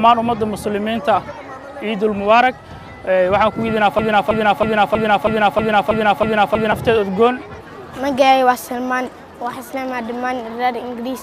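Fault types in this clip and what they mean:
Broken-record loop: from about 3.99 to 6.72 s the same 320 ms chunk of sound plays nine times back to back, exactly identical each pass, likely because the player or stream stalled and kept resending its last fragment, so whatever belonged there is gone.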